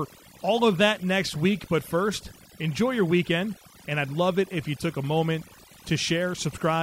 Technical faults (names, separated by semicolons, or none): overdone noise removal; clock slip clicks